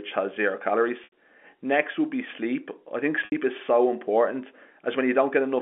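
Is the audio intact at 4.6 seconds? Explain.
Yes, the speech at 4.6 seconds is intact, with nothing at that moment beyond the narrow band of the G.711 telephone coding it passes through.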